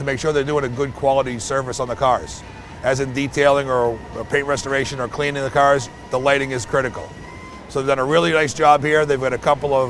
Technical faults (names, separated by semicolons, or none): none